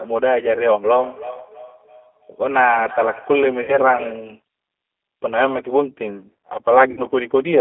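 The speech was carried through the G.729 codec, whose 8 kbit/s rebuild of each frame from a filter and few pulses leaves a narrow 250 Hz to 3.4 kHz band and a rough, synthetic texture. At 3.62 to 3.78 s and again at 6.91 to 7.01 s, VoIP packet loss concealed by the speech codec fills about 60 ms of missing audio, which fits three lost packets, by extending the last frame, so the sound turns into a fading buzzy tone or coloured noise and stays weak briefly afterward.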